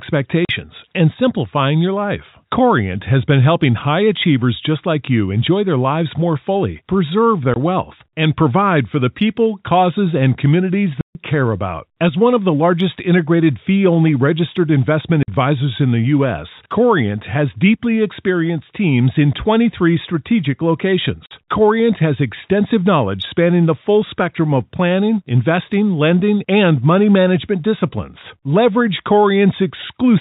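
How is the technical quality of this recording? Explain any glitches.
The recording has five dropouts from packet loss filled with silence, heard over narrowband telephone-style G.711 audio. Packets never arrived, and the receiver played nothing in their place: at 0.45 to 0.49 s (40 ms, before "and simplifying your life"), 7.54 to 7.56 s (20 ms, before "wealth and provide for"), 11.01 to 11.15 s (140 ms), 15.23 to 15.28 s (50 ms, after "fee only registered investment") and 21.26 to 21.31 s (50 ms). The gap lengths suggest 10 ms packets. Each hole cuts the speech abruptly, with hard edges.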